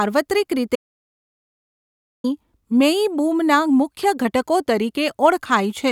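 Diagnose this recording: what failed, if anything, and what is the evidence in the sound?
Audio dropout to silence from 0.76 to 2.24 s: speech vanishes into silence with no room tone, unlike a gate, likely from a lost input connection.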